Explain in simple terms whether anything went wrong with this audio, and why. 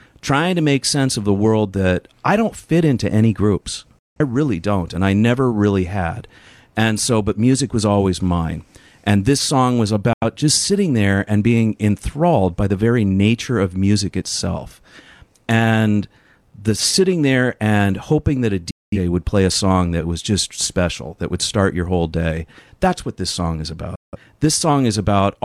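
The speech drops out four times, a classic digital broadcast dropout. The sound snaps to silence at 3.99–4.20 s, 10.13–10.23 s, 18.71–18.98 s and 23.95–24.17 s, gaps of about a tenth to a fifth of a second. The receiver lost some frames of the digital signal, or they arrived corrupted, so it muted until clean data came back. Whatever was sent during those gaps is simply gone.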